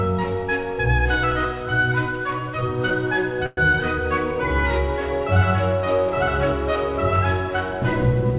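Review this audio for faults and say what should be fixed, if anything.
Between 3.46 and 3.71 s there is a call audio freeze. The last sound is stretched into a fading buzz for about 111 ms, then the audio resumes where it stopped. Nothing is lost. A likely cause is packets held up in transit draining the jitter buffer. The audio passes through a narrowband call codec, consistent with G.711 mu-law, with nothing above 4 kHz. To prevent this, give the jitter buffer more headroom or reduce network delay spikes on the route.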